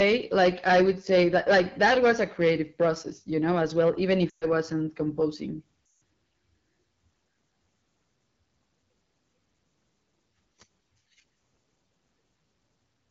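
From the start to the end, the speech carries the sound of the AMR wideband (HD Voice) codec at a low rate, which fits the 8.85 kbit/s mode. The pulse-driven vocal tract model has too few bits to describe the excitation well, so voiced sounds come out rough and raspy. The band above 6.4 kHz is synthetic noise rather than real detail. The damage is plainly audible throughout.

From 0.0 to 2.89 s there is hard clipping. The signal runs about 13 dB past what the stage can pass, so every loud part has its peaks sliced flat. Those flat tops generate harmonics well up the spectrum, and at this degree of overload the result is a harsh, continuous fuzz on all the louder speech rather than occasional crackle. It clears after 2.89 s.

Lost AMR speech frames appear twice. From 4.29 to 4.46 s about 120 ms of speech is missing, which fits six consecutive 20 ms frames. From 5.85 to 6.01 s about 160 ms is missing, consistent with eight frames. 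In each case the decoder repeats the last good pitch and vocal tract settings with decaying gain. The sound drops to near silence within two frames, as wideband concealment does, before speech returns weak or rough for a moment.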